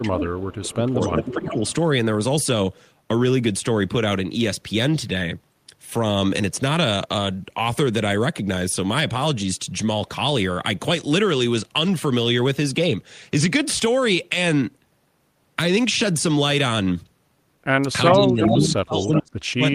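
An echo canceller that likely could not tell its own talker from loudspeaker echo while both sides spoke is behind speech suppressed in double talk from 0.02 to 0.39 s. The speech dips by about 10 dB over roughly a third of a second. From 0.41 to 0.75 s, echo that the canceller likely failed to remove leaks back as a faint copy of the speech 377 ms late, about 20 dB below it.

The suppression returns from 0.74 to 1.62 s, again by about 10 dB over roughly 0.7 s. A louder echo leak follows from 1.01 to 1.74 s, about 10 dB down. From 18.12 s to the end, double-talk suppression likely cuts much harder, by up to about 35 dB, so the speech drops almost away. Within it, echo leaks at 18.42 to 18.49 s and 19.01 to 19.19 s come back at or near speech level (about 0 and −5 dB) as short scraps.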